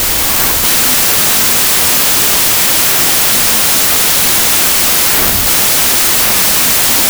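Throughout the speech there is a wrong sample width fault. Packed 24-bit samples are read as 16-bit ones. Bytes get paired across sample boundaries, so loud harsh noise buries the speech. It also plays at two-thirds speed, lower in pitch.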